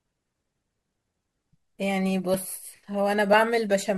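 At 1.35 s, 2.34 s and 3.33 s the speech jumps with a tiny skip. This is overlap between stream segments. Each event falls one second after the last, matching 1.0 s segments. The time stamps of adjacent segments overlap. The player trims the overlap, but that audio was never actually duplicated. So a short stretch of real sound, roughly 10 to 17 ms, is discarded. The waveform skips forward, heard as a tiny regular skip.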